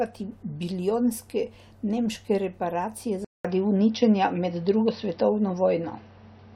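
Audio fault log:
3.25–6.55 s: likely input switched to a poorer device. After a 200 ms gap its narrower band removes everything above 5.9 kHz, the level shifts by about 5 dB, and faint background noise enters.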